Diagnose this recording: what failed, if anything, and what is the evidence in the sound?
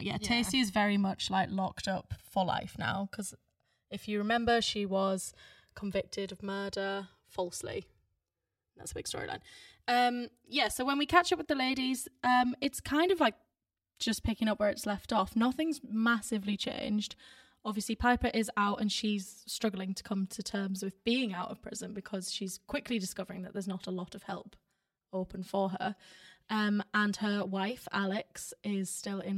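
The stereo channels are drifting apart, a converter-stage clock fault: each channel was captured on a device with its own clock, and the rates differ by something over a hundred parts per million. The inter-channel delay grows steadily across the speech, reaching roughly five milliseconds by the end. Summed to mono, this is heard as a slow flanging sweep. On a spectrogram, comb-filter notches glide steadily through the spectrum.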